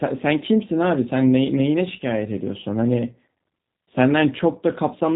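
Throughout, the speech has been carried by the G.729 codec, consistent with an 8 kbit/s G.729A stream that rebuilds each frame from a vocal tract filter, a pitch predictor and a few pulses. Nothing above 3.8 kHz survives, and the coding damage is plainly audible as a rough, synthetic edge.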